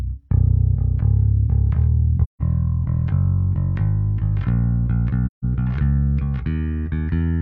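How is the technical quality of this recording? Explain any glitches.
Two brief dropouts mar the recording, both AAC frame loss with muting: one from 2.23 to 2.42 s and another from 5.26 to 5.45 s. Each gap is about 0.17 s long, which fits roughly four lost AAC frames whose spectra the decoder zeroed. The overlapping transform windows taper the sound down into silence and back up, so each hole has soft edges. A spectrogram shows a full-height blank vertical band, and the waveform narrows smoothly to a flat line.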